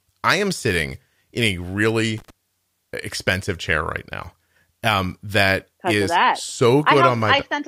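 Right after "am sitting in a", from 2.18 to 2.30 s, a burst of loose connector crackle breaks in. A worn contact is making and breaking. The speech is chopped for about 0.13 s, heard as irregular scratching.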